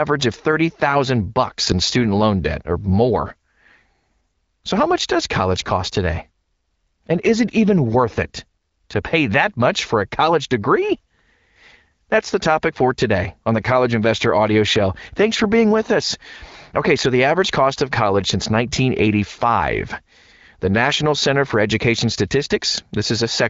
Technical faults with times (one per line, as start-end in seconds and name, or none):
none